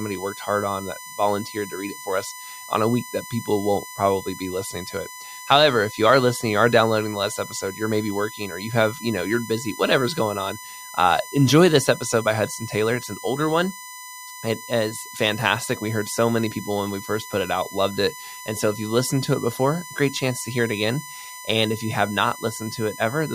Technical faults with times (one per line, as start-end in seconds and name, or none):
0.00-23.34 USB whine